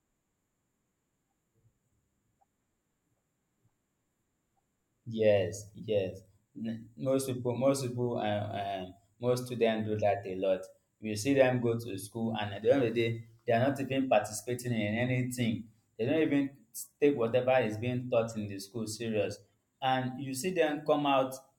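Throughout, the resampler restarted on every block converting 48 kHz to 44.1 kHz. Each 10 ms block edge errs, giving a 100 Hz buzz under the speech.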